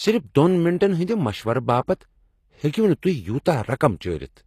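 Speech throughout carries HE-AAC compression artefacts: treble above the crossover sounds rebuilt, with gritty, lispy s sounds, and nothing survives above 14.9 kHz. Unlike plain low-bitrate coding, the top stays bright rather than dull, likely from spectral band replication at a rate fitting about 24 kbps.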